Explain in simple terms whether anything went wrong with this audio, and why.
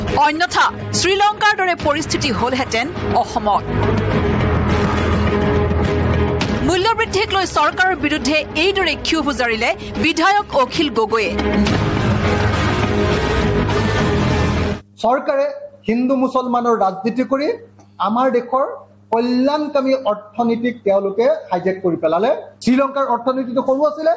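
Gain pumping runs through the whole recording, from the first second to the last. The level makes a big swing that makes the audio seem to breathe. The likely cause is a microphone level set far too high, with a fast automatic limiter repeatedly pulling it back down. That squeezes loud and soft parts together, so everything sounds flattened. The missing deep bass comes from ordinary call processing, not a fault.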